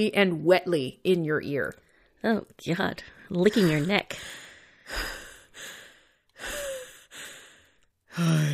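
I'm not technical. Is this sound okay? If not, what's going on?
Yes, nothing wrong can be heard in this recording.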